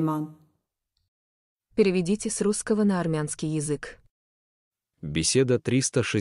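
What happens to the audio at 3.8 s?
Nothing goes wrong at 3.8 s; the speech carries on intact through that moment, with no dropout, click or distortion.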